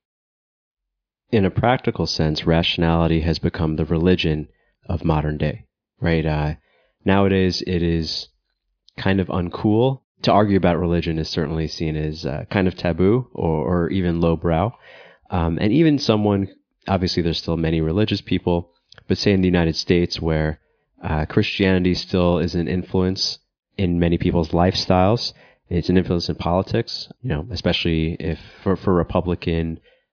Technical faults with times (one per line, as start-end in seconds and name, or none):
none